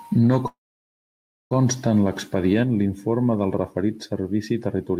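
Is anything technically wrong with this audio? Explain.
Yes. From 0.47 to 1.53 s the speech halts. The last sound trails off briefly, then 0.95 s of silence follows, and it resumes exactly where it stopped, now 1.03 s late. This call audio freeze likely came from delayed packets emptying the jitter buffer.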